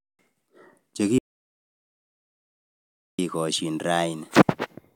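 At 1.18 s the speech drops out to dead silence, no room tone at all, until 3.19 s. That's an audio dropout to silence, about 2.0 s lost, most likely the input going away while the recorder kept writing silence, so it cuts off abruptly mid-flow.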